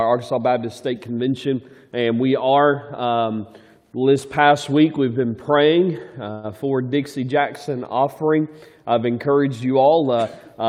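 At 6.31 s there's a call audio freeze: about 120 ms of fading buzz fills a gap, likely packets stalling and draining the jitter buffer, then the sound resumes intact.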